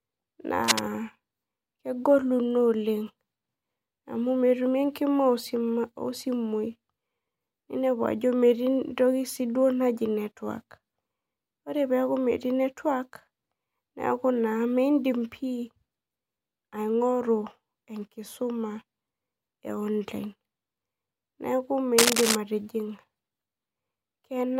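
Cable scratch noise at 0.64–0.8 s and 21.98–22.35 s: uneven scratching bursts, level with and then above the speech, likely from a worn contact's resistance fluctuating.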